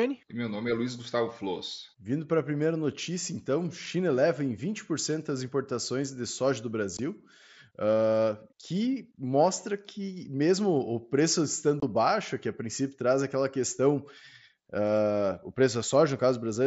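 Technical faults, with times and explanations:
6.97 s and 11.80–11.83 s, unconcealed Bluetooth headset packet loss: the mSBC link dropped voice packets with nothing filling them, leaving gaps of 15 ms after "importações de soja do" and 22.5 ms after "que mesmo o preço", before "baixo que a princípio". Those lengths fit two and three lost 7.5 ms packets. The gaps have abrupt edges.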